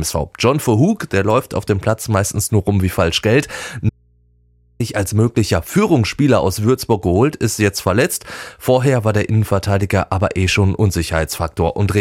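Audio dropout to a faint residue, 3.90 to 4.80 s: speech cuts out abruptly for 0.9 s, leaving faint hum, likely a lost signal on a still-live input.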